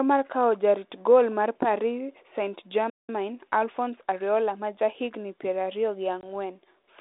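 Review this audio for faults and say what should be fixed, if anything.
A playback stall at 2.90 to 3.09 s cuts the speech dead for about 190 ms. The player likely starved or blocked. A larger playback buffer and an unblocked audio thread would prevent it.

Time-compressed catch-up follows from 3.09 to 4.99 s. The speech runs about 1.1 times fast at normal pitch. A tape-speed error would raise the pitch instead. Absorbing the stall with buffered headroom, rather than hurrying the backlog, would avoid it.

Packet loss on an ADPCM call opens a hard-edged 20 ms hole at 6.21 to 6.24 s, roughly a couple of packets. The speech then returns briefly distorted as the decoder's predictor re-converges, which plain concealment would not produce. Packet-loss concealment with decoder state reset, or jitter-buffer redundancy, would prevent it.

Throughout, the narrow telephone band and light ADPCM hiss fit a 32 kbit/s G.726 link.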